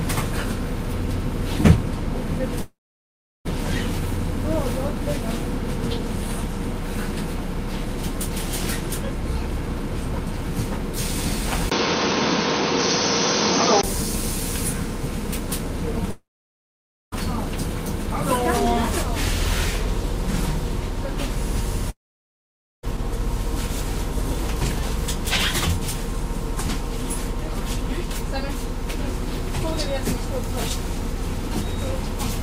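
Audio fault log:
2.61–3.47 s, 16.11–17.14 s and 21.90–22.85 s, long network dropout: three times the sound cuts out and picks up again further on with a chunk gone, about 0.84 s, 1.02 s and 0.94 s lost. Each gap starts with the last bit of sound carried on as a fading buzz or hiss, then falls to silence for about 0.72 s, 0.91 s and 0.88 s. That pattern is likely packets not arriving, with the receiver covering briefly before giving up.
11.70–13.83 s, input switched to a poorer device: there's a 20 ms silence at the switch, then the sound drops about 5 dB and turns dull and boxy, with nothing above 6.3 kHz. A new background noise comes in too, roughly 35 dB under the signal. It clears back up at 13.83 s. That's likely the input jumping to a narrower-band microphone or a headset call profile, then switching back.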